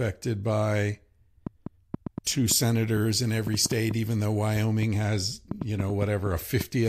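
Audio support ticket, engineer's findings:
Train of clicks, 1.47 to 6.62 s: about 20 similar pops at roughly 3.7 per second, irregularly spaced, peaking about 10 dB above the speech and audible in pauses. Likely interference or a failing interface.

Pre-emphasis left on, 2.48 to 4.65 s: thin, bright, sibilant treble, about 8 dB up at 10 kHz relative to 1 kHz, consistent with an undecoded CD-style 50/15 µs curve. Steady tilt, unlike the clicks.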